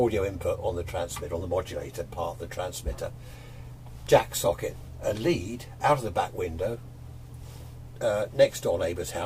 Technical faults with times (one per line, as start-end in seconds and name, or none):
4.07 electrical switching spike